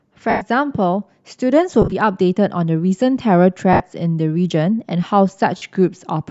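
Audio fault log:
0.30–0.42 s, 1.82–1.93 s, 3.73–3.80 s, 5.57–5.62 s, lost LE Audio frames: gaps of 110, 70 (scattered over 100 ms, longest run around 40 ms), 70 and 50 ms, which fits dropped 10 ms LC3 frames. The decoder repeats the last spectrum with random signs, smearing the speech into a noisy wash that fades as each gap continues.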